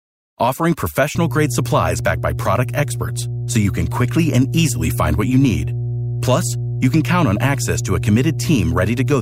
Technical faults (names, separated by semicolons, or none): mains hum